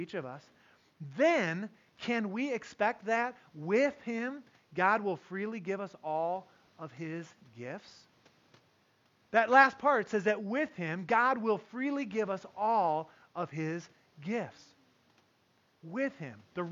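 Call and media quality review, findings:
No system faults found in the speech signal; the only background is room noise picked up at the microphone, about 38 dB below the speech level, which belongs to the recording itself.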